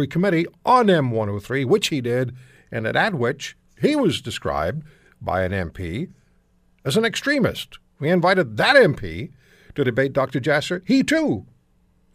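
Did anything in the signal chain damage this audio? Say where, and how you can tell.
No, nothing in the chain from capture through playback has left an audible mark on this speech recording.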